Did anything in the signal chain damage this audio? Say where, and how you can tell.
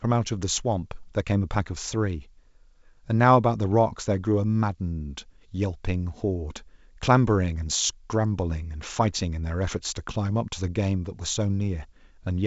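No, nothing in the signal chain damaged this audio.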